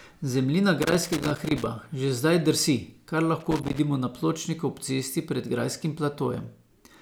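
From 0.82 to 1.66 s, loose connector crackle breaks up the speech. A worn contact keeps making and breaking, chopping the signal into an irregular scratchy burst. It returns from 3.40 to 3.79 s, shorter but the same rough crackle.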